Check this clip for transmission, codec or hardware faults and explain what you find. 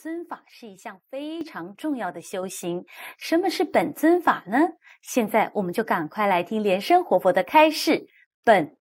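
The clip has one hardware-side fault, occurring twice. Microphone volume stepped up at 1.41 s and again at 2.43 s: the input level was raised in single jumps, about 7 dB at the first and about 5 dB at the second. This is automatic gain control on the microphone input reacting to a signal it judged too quiet. Speech and background noise both leap louder at once, with no gradual ramp.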